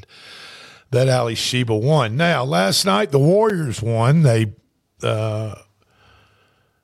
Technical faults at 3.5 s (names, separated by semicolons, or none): block of digital silence